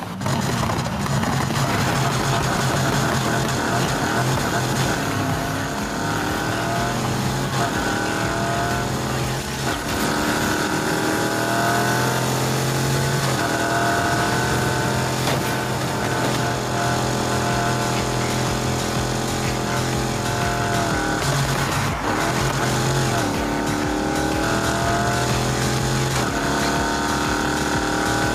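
Gain pumping runs throughout: the gain ducks by around 5 dB under loud sounds, likely from excessive input gain feeding a fast limiter.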